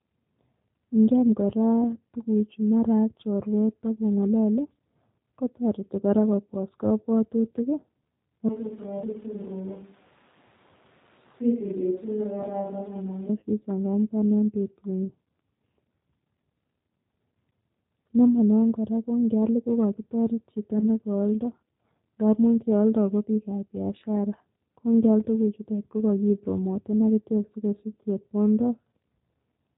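Speech passed through a G.729 codec for its whole length, and the codec damage is plainly audible. Nothing above 4 kHz survives, so the sound is band-limited and dull at the top. The voice has the slightly rough, synthetic texture of a coder that rebuilds each 10 ms frame from a vocal tract filter, a pitch predictor and a few excitation pulses rather than the actual waveform. That character fits the G.729A variant at 8 kbit/s. From 8.49 s to 13.29 s there is what sounds like a switch to a distant microphone. The voice turns roomy and hollow at once and loses low end, and the level falls by about 10 dB. Background room noise rises to about 25 dB below the speech. The most likely cause is that the close microphone dropped out and a farther pickup, such as a camera microphone, carried the recording. The transition is abrupt in both directions, and the close sound returns just before "sichangamgan en". 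Two short dropouts show VoIP packet loss concealed by the speech codec: one at 13.40 to 13.43 s, right before "sichangamgan en", and one at 20.79 to 20.84 s, just after "ko kokitoret chito". In each, about 20 ms of audio is missing, consistent with a single lost packet. The decoder fills the gap by extending its last pitch and filter state at falling gain. Because the predictor state carries forward, the voice stays weak or distorted for tens of milliseconds or more after normal packets resume.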